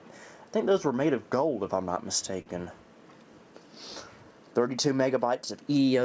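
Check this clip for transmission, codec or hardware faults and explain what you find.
One transmission fault is audible, a short stall from a late packet, heard over band-limited audio that tops out at 8 kHz, consistent with a wideband call codec such as G.722.

From 2.42 s to 2.49 s the jitter buffer ran dry because a packet arrived late. The receiver covered the gap by stretching the last stretch of audio for 39 ms, then resumed exactly where it left off, so nothing is lost. What you hear is a brief held sound with a faint buzz or dip, and everything after it lands 39 ms later than before.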